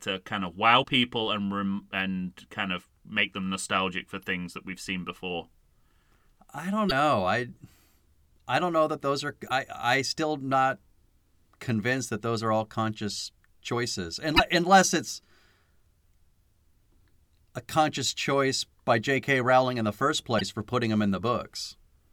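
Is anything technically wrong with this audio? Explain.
Yes. Damaged data in a compressed stream breaks the speech at 0.80–0.85, 6.86–6.92, 9.45–9.52, 14.33–14.40 and 20.36–20.42 s. Corrupted bytes make the decoder misread frames and lose sync, so each event sounds like a brief chirp, squawk, click or short hole.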